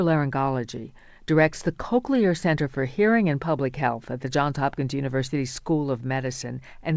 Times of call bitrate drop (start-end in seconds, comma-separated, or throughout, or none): none